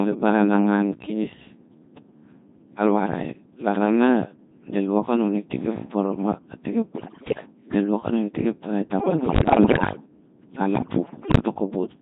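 Throughout, the speech carries heavy Codec 2 vocoder damage, consistent with about 2.4 kbit/s. Only pitch, voicing, energy and spectral envelope survive, so the voice sounds robotic and buzzy.

Bit errors on digital voice radio hit from 6.92 to 7.46 s, from 8.99 to 10.06 s after "i tik ep tarai", and from 10.76 to 11.40 s. Roughly a tenth of bits flip, somewhat fewer in the last burst. Pitch, level and tone jump into warbling gibberish.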